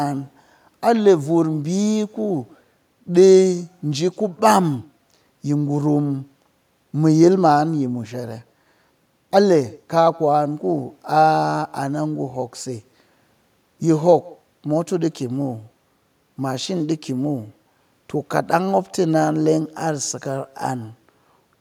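At the far end of this call the audio is being played on a loudspeaker, and the microphone there picks it back up with no echo canceller to remove it, so the talker's own speech returns after the network round trip. Throughout the clip, every phrase is trailed around 150 ms later by a faint copy, about 28 dB below the speech, that sounds thinner than the original.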